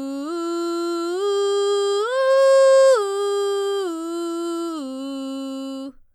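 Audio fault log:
No faults are audible in this music clip; the signal stays continuous and steady throughout.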